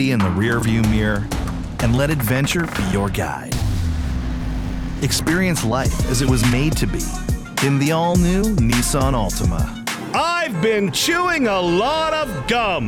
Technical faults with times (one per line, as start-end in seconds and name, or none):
none